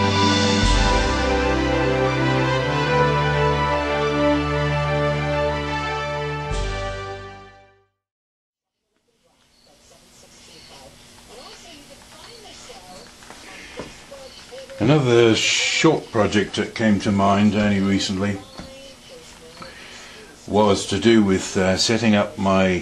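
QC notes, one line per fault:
No technical faults are audible anywhere in the signal, and its level, continuity and frequency balance hold steady throughout.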